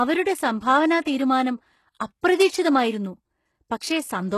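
This speech clip has plainly audible codec damage all the way through, most likely from HE-AAC compression at a low rate, which fits something around 16 kbps. Nothing at all comes through above 12.3 kHz, and the treble that is there sounds rebuilt rather than real. The top end has been copied up from the lower bands and roughly shaped, so the s sounds come out gritty and a bit metallic, with the upper harmonics not quite lining up with the body of the voice below. On top of that there's pre-echo at 1.04 s, 1.99 s and from 2.21 to 2.23 s, spreading about 14 ms, 12 ms and 20 ms respectively ahead of the attacks. Each time a sharp onset lands late in a transform block, the quantisation noise sized for that loud moment smears back into the quiet just before it. You get a short hiss leading in, and the attack itself sounds softened rather than crisp.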